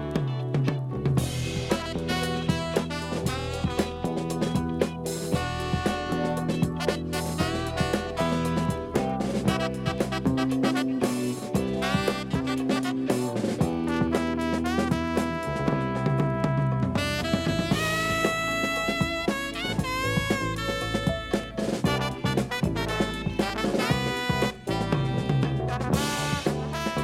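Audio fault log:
Nothing here to log, as this one came through without a single problem worth noting.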